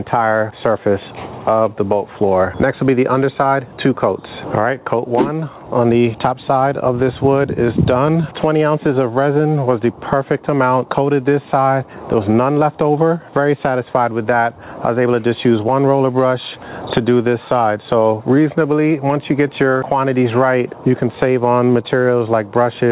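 Gain pumping runs through the whole clip. The likely cause is an input gain set far too high for the microphone, with a fast limiter or compressor pulling it back down on each loud sound. The level swings by around 15 dB, dropping under each loud moment and climbing back in the gaps, which leaves the audio squashed. Through the call path, nothing reaches above 4 kHz, which fits a G.711 mu-law codec at 64 kbps.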